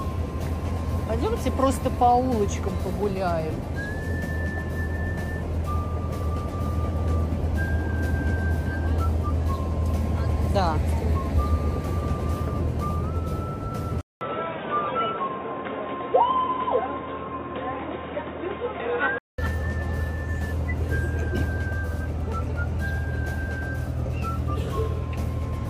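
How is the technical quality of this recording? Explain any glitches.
The recording has one glitch. From 14.01 to 19.38 s, the input likely switched to a poorer device. A 200 ms silence marks the switch. The sound then turns dull and boxy, with nothing above 3.8 kHz. A new, faint noise floor appears, around 35 dB down. Loudness barely changes.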